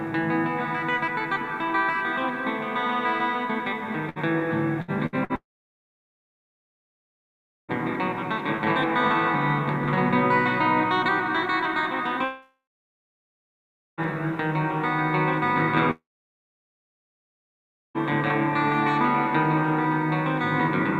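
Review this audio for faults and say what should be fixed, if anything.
Repeated packet loss (robotic sound) runs from 4.09 to 5.33 s. Four short gaps, the longest 66 ms, are each patched by extending the preceding sound, so about 20% of that stretch is concealed. The result is choppy audio with fragments missing. A larger jitter buffer and forward error correction would prevent this.

Long network dropouts occur at 5.36 to 7.72 s, 12.25 to 14.01 s and 15.91 to 17.98 s. Each time the sound smears briefly, then goes silent for roughly 2.3, 1.4 and 1.9 s, and it resumes with that section missing. The likely cause is a network outage. A more stable connection, or redundant transmission paths, would prevent these gaps.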